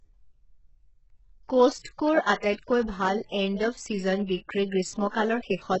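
All the way through, the speech has the smeared, gritty treble of heavy HE-AAC compression, likely from a very low bitrate: rebuilt highs, metallic sibilants, and nothing above 8 kHz.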